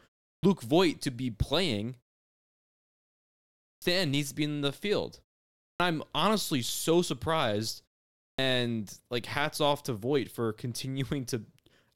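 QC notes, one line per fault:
0.34 s, 3.73 s, 5.71 s and 8.30 s: clipped start after a pause. Each time sound resumes after a gap of 0.34 to 1.79 s, roughly 85 to 91 ms of its onset is missing: before "needs to be in", between "be in the field" and "I'm honestly so surprised", and after "I'm honestly so surprised". The output device sleeps during the gap and needs about that long to wake and lock, so words burst abruptly out of silence.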